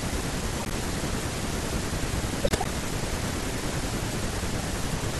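At 0.60 to 0.73 s and again at 2.44 to 2.66 s, a corrupt frame decoded fault produces chirpy, noisy bursts. Damaged frames are played with wrong spectral content (a few frames, then several, peaking near -10 dBFS), unlike packet loss, which leaves gaps or smeared repeats.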